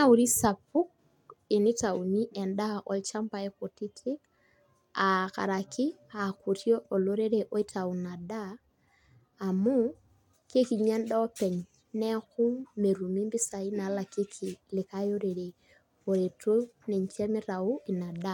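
No technical faults are audible.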